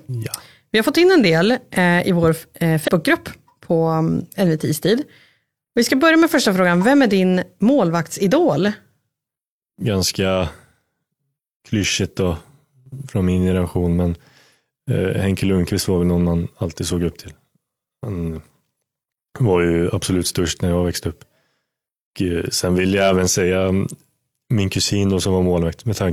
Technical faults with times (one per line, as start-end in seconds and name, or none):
2.84-2.89 compressed frames skipped